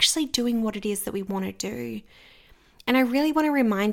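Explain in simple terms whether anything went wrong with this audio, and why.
Nothing went wrong with this recording: the speech arrives as a steady, continuous signal with no technical problems anywhere in it.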